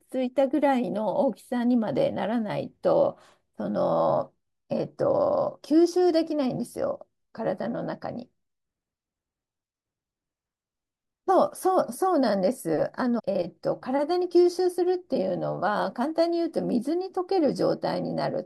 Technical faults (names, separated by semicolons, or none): stream segment skipped